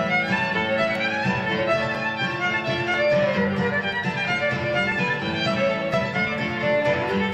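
An overlap between stream segments recurs at 0.95–0.97, 1.95, 2.94, 3.93, 4.92–4.94 and 5.94 s. Overlapping segment timestamps make the player cut 9 to 20 ms, leaving tiny skips once per second. Unlike dropouts, no silence fills the gap; the waveform simply jumps ahead.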